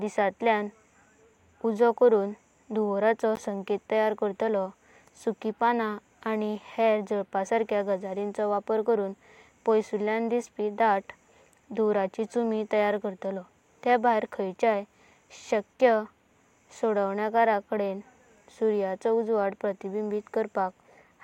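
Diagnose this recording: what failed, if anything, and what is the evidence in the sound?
At the playback stage, a Bluetooth dropout is the likely cause: audio missed its delivery to the headphones, so output went silent from 3.36 to 3.41 s, between "करून धूमवराचो" and "तैयार करतालो सुकि पानां", then resumed further on, as though the sound had played through the gap.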